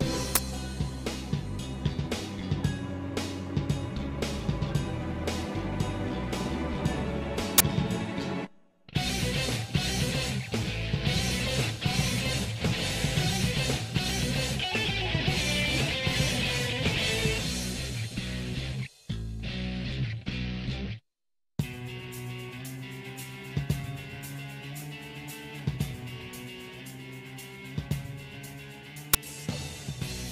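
At 0.35 s, 7.58 to 7.60 s, and 29.14 s, the audio erupts in brief, loud bursts of digital noise, the signature of an uninitialised buffer: blocks reached the output before any audio was written into them, so stale memory played as samples. The first and last last about 12 ms, fitting a 512-sample block; the middle one runs about 23 ms, suggesting 1024. A waveform shows abrupt slabs, and a spectrogram shows sharp vertical bands across all frequencies.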